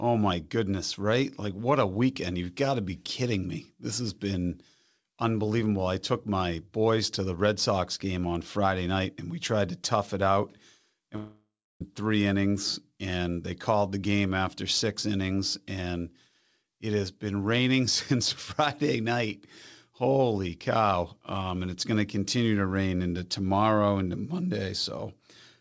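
A speech clip, band-limited to 8 kHz in a way that fits a wideband call codec such as G.722, where from 11.16 to 11.81 s the sound smears into a fading buzz, falls to about 0.3 s of silence, and resumes at "three innings and they" with roughly 0.65 s lost, likely a long network dropout.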